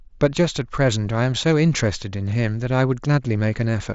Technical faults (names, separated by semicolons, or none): none